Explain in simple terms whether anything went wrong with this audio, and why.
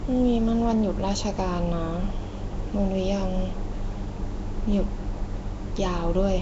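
Nellymoser compression, present from start to finish, gives the speech a rough, hissy halo and a smeared, underwater feel. It's likely the old Flash microphone codec, which squeezes sound into short blocks, swaps weak parts for noise, and keeps nothing above about 7.7 kHz.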